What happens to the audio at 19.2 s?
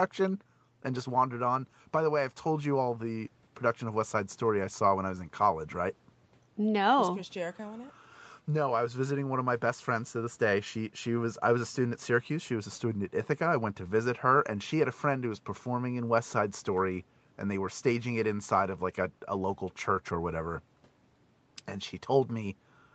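Nothing goes wrong at 19.2 s: the speech carries on intact through that moment, with only the ordinary band limit of the call path, which leaves nothing above 8 kHz.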